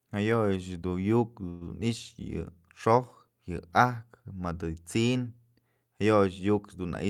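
At 1.49 s the speech stops advancing for about 0.14 s and the last sound is stretched into a short, fading buzz, a call audio freeze. The likely cause is delayed packets draining the jitter buffer. Speech resumes at 1.63 s exactly where it left off, with nothing lost but everything afterwards running 115 ms late.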